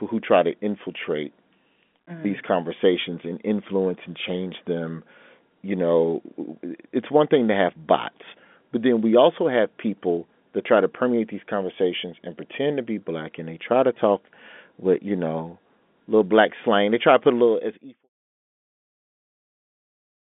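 No technical faults can be heard in this recording.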